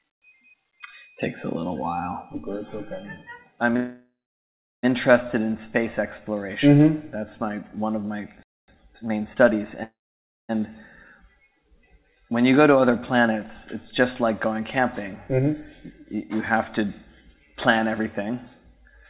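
At 3.76 s there's a call audio freeze. The sound smears into a fading buzz, then sits silent for about 0.72 s before resuming at 4.85 s with nothing lost. Packets were likely held up and the jitter buffer ran dry, adding about 1.07 s of delay. The same thing happens again from 9.83 to 10.51 s, with about 0.56 s of silence and about 0.66 s added.

Before that second freeze, a playback stall cuts the audio dead at 8.43 s for about 0.25 s, likely because the player starved for data. From 8.68 to 9.66 s there's time-compressed catch-up. The player trims small cross-faded chunks to clear its backlog, so everything runs at 1.25 times speed at normal pitch.

Late in the clip, jitter buffer speed-up happens three times: 12.69–13.35 s, 16.01–16.87 s and 17.75–18.76 s. The receiver snips out tiny pitch-period slices to shed excess buffered audio, about 50 to 70 ms each time. The result is roughly 5–6% faster, same pitch, a little rushed.

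Throughout, nothing comes through above 4 kHz, which fits a G.711 mu-law call path at 64 kbps.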